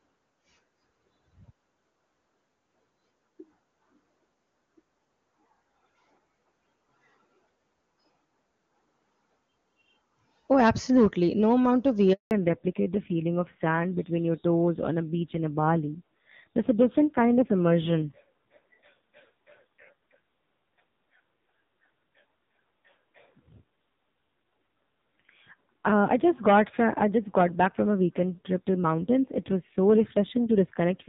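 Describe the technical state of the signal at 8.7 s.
At 8.7 s the speech is intact, carried cleanly through the AMR wideband (HD Voice) codec at its 23.85 kbit/s top rate.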